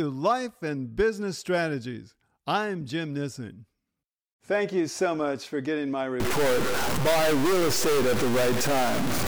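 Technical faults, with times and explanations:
6.20–9.27 s: stuck bit. From just after "much for getting my", the speech turns harsh and buzzy, and pauses fill with noise. The likely cause is one data bit held fixed, shifting about half the samples by a step of roughly -20 dBFS. The waveform looks jagged and step-offset, and the spectrogram shows broadband hash filling the gaps.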